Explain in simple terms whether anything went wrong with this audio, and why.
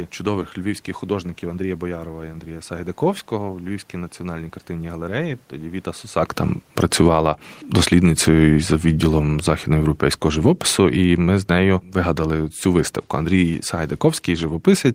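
Two things go wrong here, both from the automatic gain control, the part of the recording chain that turns the level up or down on its own.

From 6.62 s right to the end there's automatic gain falling. Just before that, around 6 s, the talker shifts position, which by itself is normal. But the gain control decides the input is too loud, or its background noise too strong, and starts easing its level down, gradually. The giveaway is that the voice and the room noise behind it sink together, so it isn't the person getting quieter. It's the whole recording being turned down.

Overlapping that, from 7.2 s to 8.59 s, there's automatic gain rising. For roughly a second and a half the control goes the other way, judging things too quiet and nudging the level back up. Again the voice and the background swell as one, which points to the gain control rather than anything in the room. So in that stretch the level rises briefly while the longer slide downward is still under way.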